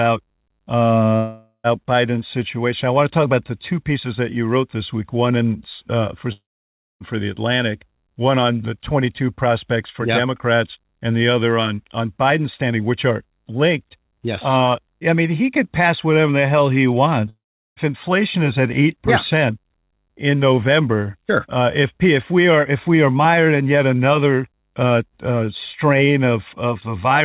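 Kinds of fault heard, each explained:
Long network dropout: Packets likely stopped arriving for about half a second or more, so the receiver had nothing to decode and concealed the gap by stretching the last sound into a fading buzz before it sank into quiet. This happens at 1.16 s, at 6.32 s just after "one in uh for", and at 17.29 s after "whatever the hell he". The speech resumes, as at "inflation is at", without the lost part.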